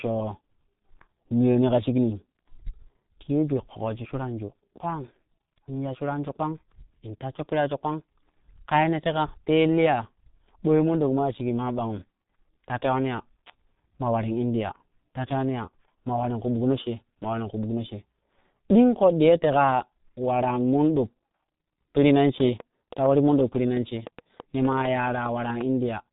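Throughout, the speech has passed through a G.723.1 codec at what sounds like about 6.3 kbit/s; with nothing above 3.8 kHz and heavy coding damage, it comes out muffled and hoarse, with smeared consonants. From 22.29 to 25.62 s, just after "peiri nan", a train of clicks, likely from electrical interference or a failing interface, lays around twenty sharp pops at an uneven pace near seven per second, standing well above the speech.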